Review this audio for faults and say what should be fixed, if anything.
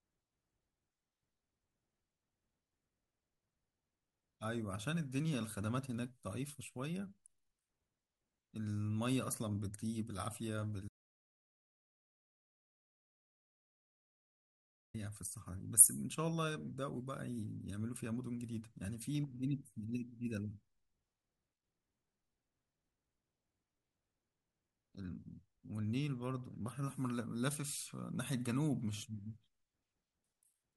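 An audio dropout to silence runs from 10.89 s to 14.94 s. The speech cuts off mid-flow. 4.1 s of it is gone. The gap is silent, with no room tone. The input was likely lost while the recorder kept writing silence. Monitor the input live and secure every cable and connection so that a lost signal is caught during the recording.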